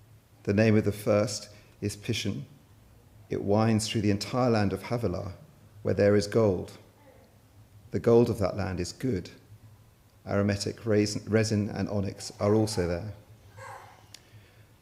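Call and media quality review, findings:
Nothing to flag here; had a good listen and there's no fault to chase down anywhere in this one.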